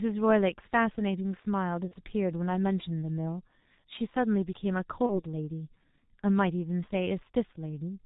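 G.723.1 codec distortion runs throughout: at about 6.3 kbit/s with 30 ms frames, nothing above 4 kHz survives, leaving the speech muffled, hoarse and smeared at consonants. VoIP packet loss concealed by the speech codec occurs at 1.88–1.94 s and 5.06–5.24 s. Each gap fits one lost 30 ms frame, extrapolated into a fading buzzy tone or coloured noise that stays weak afterward.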